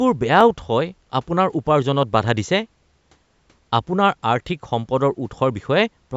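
From 0.41 s to 6.09 s, a click lands roughly every 0.81 s in the speech, about seven in all. These are clock drift buffer slips: two clocks disagreeing by a few hundred parts per million let the buffer between them creep until a handful of samples is dropped or repeated, the likely cause here. Their metronomic spacing separates them from random packet-loss dropouts or crackle, which fall irregularly and often leave audible gaps.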